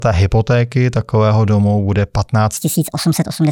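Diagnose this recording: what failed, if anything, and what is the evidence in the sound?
Wrong sample rate at playback: from 2.57 s, speed rises 1.5 times and pitch 7 semitones in lockstep, fitting 32 kHz audio played at 48 kHz, unlike pitch-shifting.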